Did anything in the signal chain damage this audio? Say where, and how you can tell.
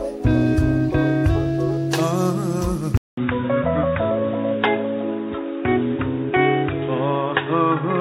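Yes. At about 2.97 s the sound drops out for around 200 ms, then comes back dull and boxy, with nothing above 3.8 kHz through to the end. A new noise floor sits roughly 30 dB under the signal, though the level itself barely shifts. That points to the input stage: most likely the input switched to a poorer device mid-take, such as another mic or a headset's call profile, with its narrower band and its own hiss.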